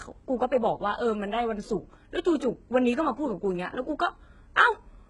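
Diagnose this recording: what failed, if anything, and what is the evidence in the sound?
Throughout the speech, the treble sounds bright but synthetic: s sounds come out gritty and lispy, with a metallic sheen, and nothing at all is heard above 11 kHz. The damage is heavy and points to the codec stage, most likely HE-AAC compression. The core coder kept only the lower spectrum and regenerated the top by copying lower bands upward under a coarse envelope, so those harmonics no longer match the originals. That fits a very low bitrate, around 12 kbps.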